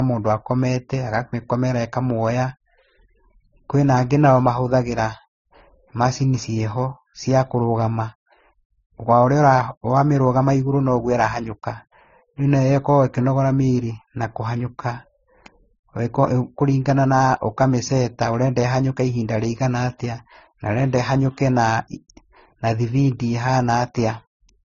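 Transcoding between lossy codecs runs through the whole speech clip. The sound carries the artefacts of several codecs heard together at once, with nothing above 7.5 kHz. This is likely the result of passing through several low-bitrate codecs in turn, consistent with an AAC, then Opus, then MP3 chain. Each later encoder spent its bits reproducing the earlier artefacts while adding its own, and the lowest cut-off survived to the end.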